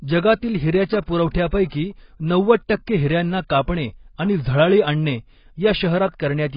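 AAC compression runs through the whole speech clip: nothing is heard above about 5.1 kHz, and the remaining band sounds dull, smeared and warbly, with fizzy sibilants. This heavy damage is likely from AAC-LC at a very low bitrate, around 16 kbps, which drops the upper spectrum and starves the rest of bits.

Pre-echo follows at 1.31 to 1.35 s, right after "जगातील हिऱ्याच्या". A sharp onset late in a transform block had its quantisation noise spread across the block, so a short 36 ms hiss arrives before the attack, which itself sounds softened and blurred.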